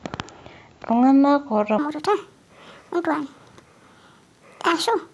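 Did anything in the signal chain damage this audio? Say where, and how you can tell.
Yes: a wrong sample rate at playback from 1.79 s to the end. Speech turns 1.5 times faster and about 7 semitones higher, which fits 16 kHz audio clocked out at 24 kHz.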